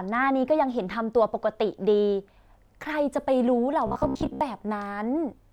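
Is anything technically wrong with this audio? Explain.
Yes. From 3.87 to 4.41 s the speech turns into robotic sound from repeated short buffers: a rigid, metallic buzz near 66.7 Hz that only loosely tracks the speech. The likely cause is audio arriving too slowly, so a 15 ms chunk is replayed while most of the real signal is skipped.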